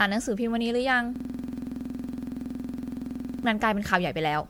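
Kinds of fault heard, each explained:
generation loss: The speech sounds swirly, smeared and hollow throughout, with blurred attacks and more damage than a single lossy pass would leave. The likely cause is repeated MP3 decoding and re-encoding, around seven passes at something like 96 kbit/s, each requantising on a shifted frame grid.
system hang loop: From 1.16 s to 3.45 s, one 46.4 ms slice of audio repeats exactly, dozens of times, giving a rough buzz at 21.5 Hz. The system froze while the sound hardware kept replaying its ring buffer, which fits a 2048-sample buffer.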